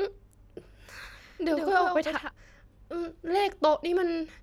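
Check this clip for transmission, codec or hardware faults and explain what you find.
From 1.03 to 2.31 s the speech is heard twice, a second dry copy trailing about a tenth of a second behind and somewhat quieter, cutting in and out abruptly. This doubled audio track is likely a second capture through a slower path.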